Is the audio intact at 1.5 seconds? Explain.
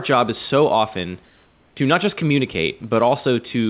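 No. From 1.25 to 1.76 s, after "job is so often", the background turns flat, featureless and about 2 dB quieter, likely comfort noise in place of the background, synthesised while transmission paused.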